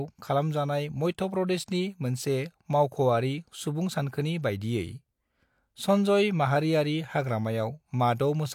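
No technical faults can be heard anywhere in the recording, so the signal stays intact and continuous throughout.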